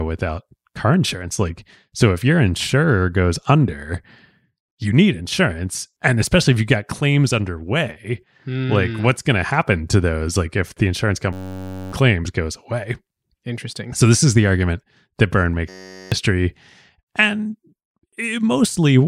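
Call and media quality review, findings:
System hang loop, 11.33–11.93 s, between "if the insurance" and "goes away": steady buzz at 93.8 Hz. A 10.67 ms fragment repeats dozens of times, which fits a 512-sample ring buffer replayed while the driver or host stalls. About 0.7 s of speech lost.

System hang loop, 15.69–16.12 s: the same 93.8 Hz buzz from the same 10.67 ms loop length, about 0.4 s lost. Suspect audio driver or host scheduling stall.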